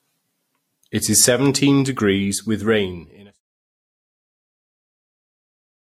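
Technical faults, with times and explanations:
Throughout, transcoding between lossy codecs: the speech was likely encoded at a very low rate with one codec and then re-encoded as MP3, the first pass fitting something around 26 kbit/s Vorbis and the second about 96 kbit/s. The later encoder spent its bits reproducing the earlier artefacts, then added its own. Nothing remains above 16.4 kHz. The layered artefacts carry on under the smooth fade-out ending near 3.41 s.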